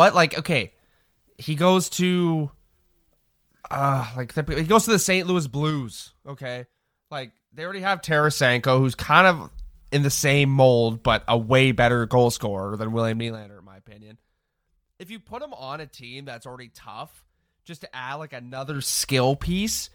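Speech with zipper noise: ticking rides on level moves at 4.92–6.32 s, 7.80–8.36 s, 13.10–13.56 s and 18.48–18.86 s, because gain jumps in unsmoothed 3 dB steps.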